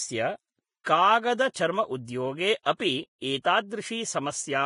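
The whole speech clip sounds hissy and grainy, with nothing above 10.5 kHz and a roughened treble. That's likely heavy Vorbis compression at a low bitrate, around 27 kbps, with the fine top-end detail quantised so coarsely it turns into noise.

Pre-echo follows from the same block coding. There's a short hiss just ahead of attacks at 0.83–0.86, 1.54–1.56, 2.05–2.08, 2.63–2.66, 3.42–3.45 and 3.70 s, spreading roughly 16 to 34 ms. Each attack comes out soft and smeared because quantisation noise fills the quiet moment before it.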